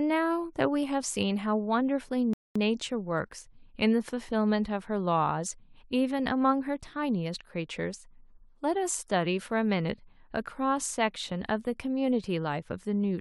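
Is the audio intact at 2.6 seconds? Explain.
Yes, nothing's missing at 2.6 s, but you're hearing the tail end of a rebuffering stall. From 2.33 to 2.56 s the player ran dry and went silent, then picked the speech up exactly where it paused, adding about 0.22 s of dead air.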